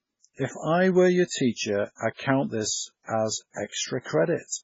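Throughout, the speech sounds watery and swirly with nothing above 7.6 kHz, likely from heavy MP3 compression at a bitrate near 16 kbps.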